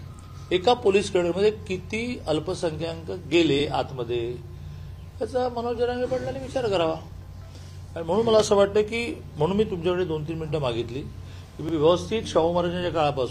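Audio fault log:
3.60–3.64, 7.64–7.69 and 11.69–11.73 s: overlapping chunks. Each 4 s chunk starts 44 ms early, so that slice replays, giving a regular stutter that shows as duplicated waveform and a vertical seam on the spectrogram.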